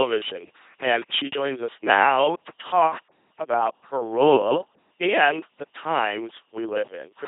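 Throughout the clip, the speech has passed through an LPC-10 vocoder. The coder keeps only a short all-pole vocal tract model plus a voiced-or-unvoiced switch, and the heavy damage fits a rate of about 2.4 kbit/s. Each moment is rebuilt from either a pulse train or noise, so the voice comes out as a flat, buzzing robot tone, with hiss or buzz where voicing is misjudged, and nothing above 3.8 kHz. The pauses fall silent cleanly between phrases.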